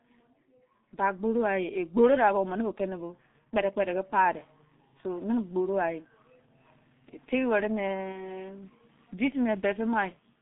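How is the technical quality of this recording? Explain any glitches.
The technical quality is poor: heavy low-bitrate coding runs through the whole recording, and there is one short dropout near the end.

G.723.1 codec: The speech has been squeezed through this early internet-telephony codec, and the heavy damage fits its 6.3 kbit/s mode. The line passes roughly 150 Hz to 3.7 kHz, and the codec's slowly updated voice model works in 30 ms chunks. As a result, the speech sounds muffled and hoarse throughout, with blurred, smeared consonants.

VoIP packet loss concealed by the speech codec: From 8.12 to 8.24 s, about 30 ms of data went missing, which points to a single lost frame. The decoder filled the gap by extending its last pitch and filter settings at falling gain. This briefly stretches the speech into a buzzy tone or coloured noise that fades. Because each frame builds on the one before, the voice stays weak or distorted for the rest of that span even after the data returns.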